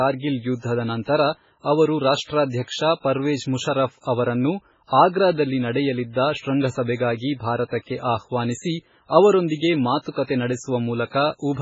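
Throughout the speech the sound is watery and swirly with smeared consonants and nothing above about 7.7 kHz, likely from heavy MP3 compression at a very low bitrate, around 16 kbps.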